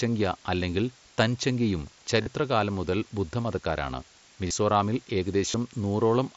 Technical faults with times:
0.00-6.37 low bit depth with dither
2.22-2.26 concealed Bluetooth headset packet loss
4.47-4.51 concealed Bluetooth headset packet loss
5.52-5.54 concealed Bluetooth headset packet loss

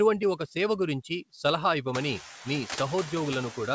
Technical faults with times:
0.00-3.75 noise suppressor artifacts

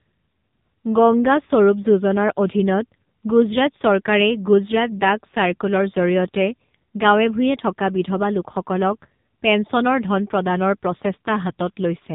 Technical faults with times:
0.00-12.14 AMR narrowband mobile codec

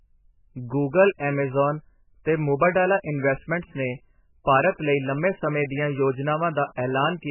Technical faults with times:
0.00-7.30 MP3 compression

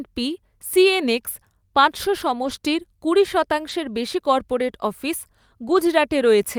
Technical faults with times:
2.43-2.49 lost packet rebuilt from error correction
3.69-3.71 lost packet rebuilt from error correction
5.63-5.81 lost packet rebuilt from error correction

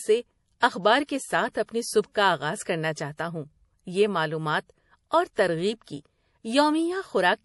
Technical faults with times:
0.00-7.44 MP3 compression
0.60-0.62 pre-echo
1.04-1.09 pre-echo
1.66-1.69 pre-echo
5.33-5.37 pre-echo

